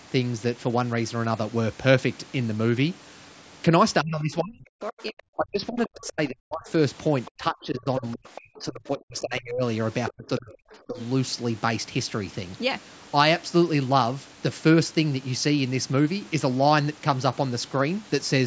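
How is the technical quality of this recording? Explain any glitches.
The recording has clear call-processing glitches. Several stretches of speech are cut back, and faint scraps of a second voice come through, all within a band that stops at 8 kHz.

Speech suppressed in double talk, from 4.02 to 6.69 s, 7.36 to 9.63 s, 10.15 to 10.70 s and 10.87 to 10.99 s: the echo canceller likely mistook overlapping talk for its own loudspeaker echo and turned everything down. The speech dips and breaks into pieces, by as much as 40 dB at worst.

The other side's voice is leaking through at 5.87 to 6.09 s, 7.25 to 7.31 s, 7.99 to 8.41 s and 10.05 to 10.12 s. The echo canceller likely left part of the loudspeaker playback in the microphone signal. Brief fragments of a second voice come through, roughly 15 to 25 dB below the main speech.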